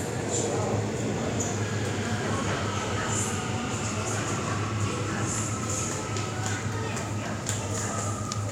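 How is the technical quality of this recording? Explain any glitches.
No audible glitches or faults.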